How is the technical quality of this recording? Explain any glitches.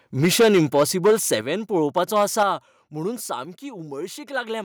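The recording has clear technical faults: distortion on loud passages and sudden drops in level.

Microphone overload, from 0.23 to 1.34 s and from 1.97 to 2.43 s. The peaks sound harsh and crackly. The likely cause is input gain set too high, so the tops of the waveform are flattened at the converter's limit. The first stretch runs about 10 dB over, the second about 4 dB.

Microphone volume stepped down, at 0.41, 1.41 and 2.43 s. The whole sound drops abruptly, by about 2, 7 and 5 dB. The likely cause is the software cutting the input gain in single steps in response to the overloads.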